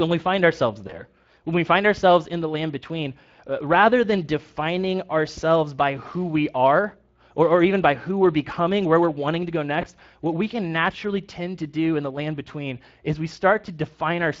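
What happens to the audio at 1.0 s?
Around 1.0 s you're hearing VoIP packet loss concealed by the speech codec. From about 0.87 to 1.02 s the decoder stretches its last pitch and filter, so the sound turns briefly into a buzzy tone or coloured noise that fades before recovering. The gap fits one lost 20 ms frame, with the dip lingering past it. Underneath, the Speex codec's damage is plainly audible, which fits Speex at roughly 20 kbps.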